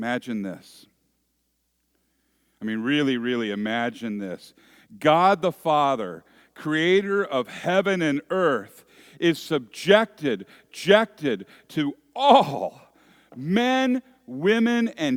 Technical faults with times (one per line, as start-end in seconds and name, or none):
10.69-11.69 stream segment repeated